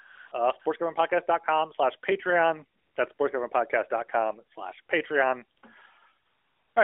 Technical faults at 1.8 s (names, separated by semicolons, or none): none